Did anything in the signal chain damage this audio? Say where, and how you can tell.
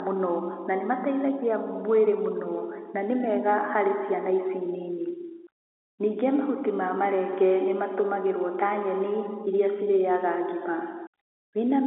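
No damage in the chain.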